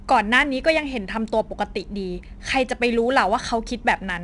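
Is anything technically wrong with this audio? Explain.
Yes. The whole speech clip carries 4-bit ADPCM compression. Each sample is coded as a coarse 4-bit step from a prediction, and the resulting error is a gritty, broadband hiss that rises and falls with the speech level and is plainly audible on louder syllables. Nothing is present above 10.6 kHz, which points to a sample rate around 22 kHz and a bitrate near 89 kbps. Unlike MP3-style artefacts, there is no swirling or warbling, only hiss that tracks the signal.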